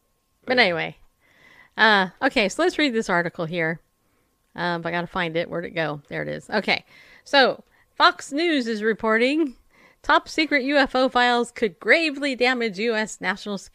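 No technical faults can be heard anywhere in this speech recording. Nothing in the audio calls for a time mark or an explanation.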